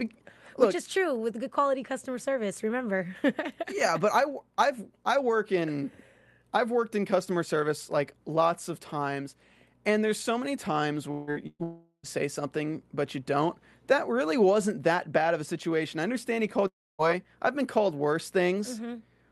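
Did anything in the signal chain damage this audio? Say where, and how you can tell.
Yes. At the network stage, long network dropouts are likely at 11.11 to 11.30 s after "there's so many times", 11.63 to 12.06 s, and 16.67 to 17.02 s before "I've been called worse". The last sound is stretched and fades, and in the later two it fades to near silence. Their length sets them apart from a burst.

A short concealed packet loss occurs at 11.31 to 11.38 s. About 40 ms is synthesized and blended back as a brief smear. It never drops to silence.

A burst of packet loss spans 11.47 to 11.62 s. Roughly 120 ms is missing and covered by the last sound continued and faded, ending in a short silence. It is longer than the short loss but shorter than the dropouts.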